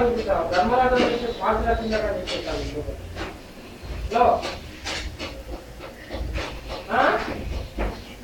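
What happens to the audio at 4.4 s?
Nothing goes wrong at 4.4 s: the audio passes that point intact, with no dropout, click or distortion.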